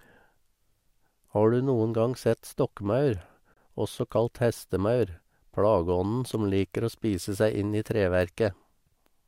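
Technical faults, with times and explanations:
3.54 to 3.57 s, gap at a join of encoded pieces: the audio was encoded as separate pieces and joined without trimming, so the padded final frame of one piece and the leading encoder delay of the next both stayed in the stream. The result is a silence of about 29 ms that cuts into continuous speech, with edges smeared by the codec, before the sound resumes exactly where it stopped, just ahead of "også kalt hestemaur". The spacing points to joins every 6 s.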